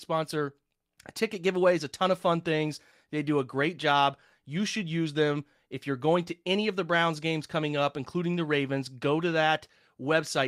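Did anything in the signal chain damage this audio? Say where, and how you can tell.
No, nothing in the signal chain damaged this audio.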